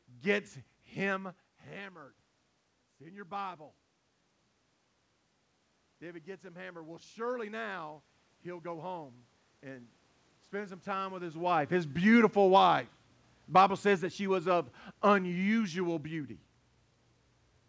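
From 5.99 s to 8.98 s the speech and the background noise swell together, rising by about 5 dB over roughly three seconds rather than jumping. That joint rise is the mark of automatic gain rising: the gain control judged the incoming level too low and raised its gain step by step, lifting the room noise along with the voice. A talker moving closer would raise the voice alone.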